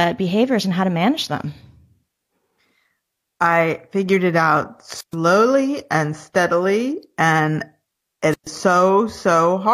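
Right after "I figured it out", at 4.97 s, there's a wireless microphone squelch dropout running to 5.15 s. The radio link from the FM mic fades, hiss swells briefly, and then the receiver's squelch slams the output shut for about 128 ms, leaving a dead hole before the talker comes back. The same thing happens again from 8.31 to 8.48 s, with a mute of about 130 ms and that same rise of static going in.

Between those, at 6.30 to 6.34 s, there's an overlap between stream segments. Two chunks of the stream claim the same stretch of time, so the player trims the shared bit. That throws away a sliver of audio that was never actually duplicated. You hear it as a small click or skip where the waveform jumps across the gap. The stream was cut into 4-second segments.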